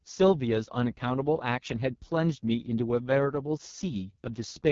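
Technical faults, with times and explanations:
Throughout, AMR wideband (HD Voice) codec: the speech is rebuilt from a pulse-excited vocal tract model rather than carried as a waveform, and the reconstruction is heavily damaged, leaving a rough, raspy texture. That level of damage fits the codec's lowest mode, about 6.6 kbit/s, where too few bits remain to model the excitation properly. The top band between 6.4 and 7 kHz is shaped noise, and nothing is present above 7 kHz.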